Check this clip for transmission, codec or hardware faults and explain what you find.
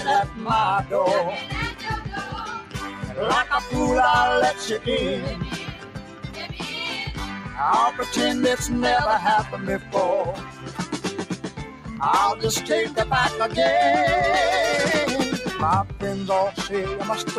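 A noise suppressor applied to music or sounds, made for speech, is active throughout. It treats sustained, steady content as noise, so level swings by about 10 dB: attacks pass while held material and tails sink, giving a pumping, thinning character.

Sound cut by the noise suppressor occurs at 2.61–3.1 s, 5.53–6.38 s, 7.4–7.56 s, 9.79–9.94 s, 10.36–11.0 s and 11.3–11.88 s. The suppressor misjudged these stretches as noise and pulled them down by about 5 to 8 dB, so sustained parts dip and decays end early.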